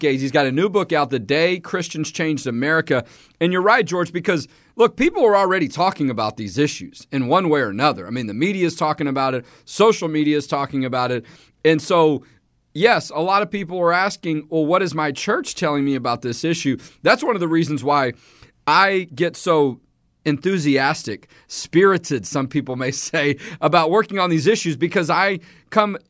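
Listening to this speech recording, nothing technically wrong stood out.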